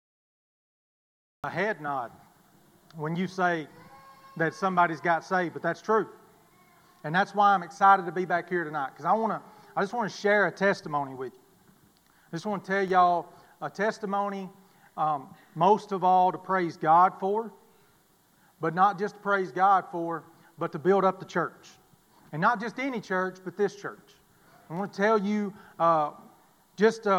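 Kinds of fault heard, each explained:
Cut-off start: the audio sits in digital silence until 1.44 s, then jumps straight into a sound already under way, with no natural attack or fade-in. The capture or stream began late, so the opening of that sound was never recorded.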